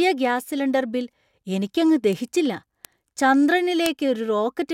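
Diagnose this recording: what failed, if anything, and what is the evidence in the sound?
Three sharp broadband ticks in the speech at 2.13 s (just after "ബിൽ എനിക്കങ്ങ്"), 2.85 s and 3.86 s, peaking near about −12, −6 and 0 dBFS: bit error spikes, flipped bits on a digital link or in storage.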